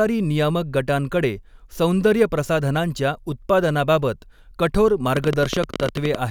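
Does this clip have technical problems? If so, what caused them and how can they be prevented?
Yes. After "गटांकडे सौंदर्यप्रसाधनांच्या उत्पादनाबाबत कठोर", a train of clicks runs from 5.17 to 6.16 s. That's about twenty uneven pops at 17.3 per second, peaking about 10 dB over the speech. The likely cause is interference or a faulty connection or power supply. Shielding the cables and checking the connections and power supply should prevent it.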